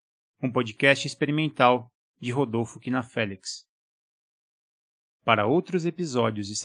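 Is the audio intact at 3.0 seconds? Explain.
Yes, the speech at 3.0 seconds plays through cleanly, with no dropout, click, distortion or other fault at that moment.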